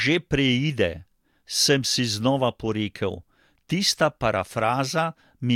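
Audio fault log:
Nothing to log here; I listened through this speech clip and didn't catch a single fault anywhere along the way.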